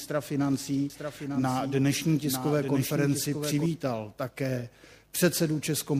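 From 0.90 s to 3.66 s a doubled audio track appears: a second, full-band copy of the sound runs about one second behind the original and about 5 dB quieter, likely because the audio was captured again through a slower path or an edit left two copies out of step. Unlike an echo or reverb, the copy has no decay and no room colour, and it starts and stops abruptly rather than fading.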